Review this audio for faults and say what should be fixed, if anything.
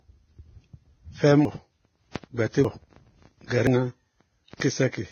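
The speech sounds band-limited, with two different kinds of coding artefact layered together. This is likely transcoding between lossy codecs. The pattern fits a very low-bitrate Vorbis stage followed by AAC-LC at around 32 kbit/s, where the second encoder spends its bits re-encoding the first one's damage and the lowest cut-off in the chain stays. To prevent this, encode once from the original lossless source at an adequate bitrate.

There are abrupt forward jumps in the sound at 1.45, 2.65 and 3.67 s, each losing roughly a tenth of a second. A larger jump at 4.61 s loses about a third of a second. There is no silence in these gaps. The audio on either side is simply butted together, which points to a dropped buffer (overrun): the capture software likely failed to read its samples before the hardware overwrote them. To prevent this, give the capture thread higher priority or use larger buffers so reads never fall behind.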